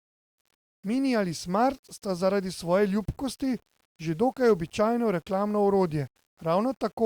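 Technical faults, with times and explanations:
Throughout, low bit depth without dither: the speech carries a grainy distortion that rises and falls with it, sitting roughly 40 dB below the signal, and quiet syllable tails sputter or drop to silence. This likely comes from rounding to about 8 bits with no dither, which leaves error that follows the sound rather than a steady hiss.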